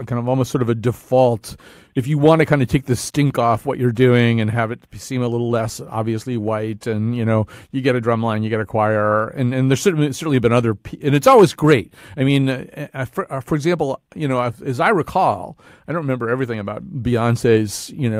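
Clock drift between sender and receiver runs through the whole recording. The sender's clock is roughly five percent fast, so the receiver's buffer keeps overfilling.

Repeated timing corrections follow from 0.01 s to 18.10 s. The receiver trims short pieces unevenly, matching a 105% rate.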